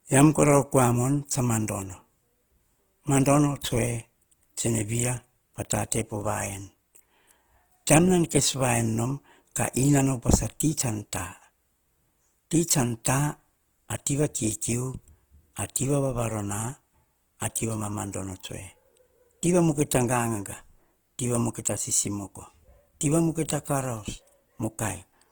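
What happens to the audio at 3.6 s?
At 3.6 s the speech has a rough, grainy texture, with tonal parts of the sound turned noisy, and the damage is plainly audible. The top end stays open up to about 20.2 kHz, so it sounds coarse rather than muffled. This roughness runs through the whole clip, not just this moment. It is likely Opus compression in its music mode at a low rate, which fits about 16 kbps. Starved bands get filled with folded or noise-like content instead of going silent.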